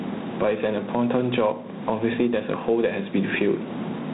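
From the first moment to the end of the speech, the level breathes, with a swing of around 15 dB. Loud and quiet syllables sit unnaturally close together and the delivery sounds squashed. This is gain pumping, most likely from input gain set far too high for the microphone, with a fast limiter or compressor clamping down on every loud moment and releasing in the gaps. The room noise sits about 40 dB below the speech.

Running across the same stretch is a clearly audible harsh, rasping hiss that rides on the speech, louder on strong syllables and fading with them, and the audio is confined to telephone bandwidth with nothing above 4 kHz. That is G.726 ADPCM coding, which sends only the difference between each sample and an adaptive prediction. The roughness of the hiss fits the 24 kbit/s mode, where only three bits per sample leave coarse steps that leave this level-tracking grit on the speech.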